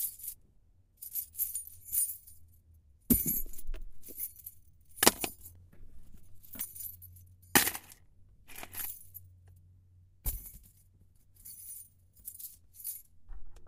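At 5.55 s a block of digital silence drops in for under a millisecond, about 0.79 ms, likely where the output buffer went unfilled and the samples became zeros. It is heard as a tick; the waveform shows a flat gap, the spectrogram a thin vertical broadband line.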